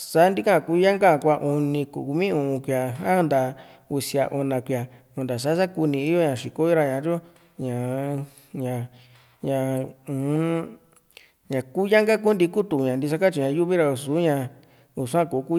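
Nothing stood out as a technical fault when listening to this speech recording.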